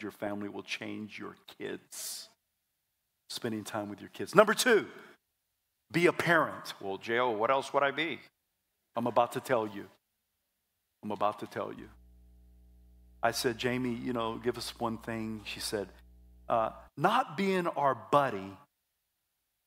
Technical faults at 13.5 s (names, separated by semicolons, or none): mains hum